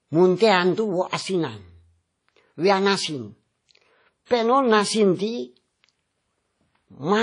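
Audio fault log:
throughout, WMA compression: The speech rings and sounds washy, with a hiss that rises and falls with the signal and nothing above 10.1 kHz, which fits a transform codec at a low bitrate around 32 kbps, likely WMA. On a spectrogram, weak detail shows as blank patches below a hard ceiling.
1.08 to 1.13 s and 4.26 to 4.31 s, pre-echo: Just after "munte antu", and again later, a short hiss leads a sharp onset by 44 ms and 50 ms, softening the attack. The codec's noise, spread across a block, fills the quiet before it. The waveform shows a smear ahead of each attack.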